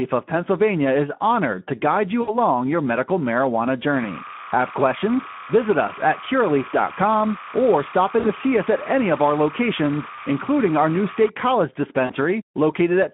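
Right from the start the whole clip carries Speex codec damage, and it's plainly audible. The speech is squeezed into a telephone band of about 150 Hz to 3.4 kHz, and the grainy, hoarse edge fits a low setting around 11 kbps, where the excitation gets too few bits.

Then there's VoIP packet loss concealed by the speech codec, at 2.21 to 2.35 s (between "honored to guide you" and "your medical marijuana"), 8.19 to 8.29 s, 10.15 to 10.24 s and 12.06 to 12.13 s. Each time the decoder stretches its last pitch and filter into a fading tone or noise, and the speech stays weak or distorted for a moment after.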